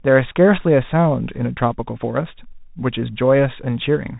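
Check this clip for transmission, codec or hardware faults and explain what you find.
One fault is present throughout the speech: a Bluetooth CVSD headset codec. Its one-bit up/down adaptive coding, consistent with a 64 kbps stream, cuts everything above 3.8 kHz, leaving dull, scratchy sibilants over a granular hiss.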